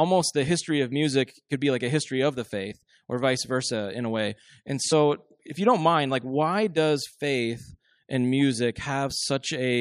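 At about 2.68 to 2.72 s the speech jumps forward, classic compressed frames skipped. A frame or so of encoded audio never got decoded, roughly 20 ms worth, so the decoder just moved on.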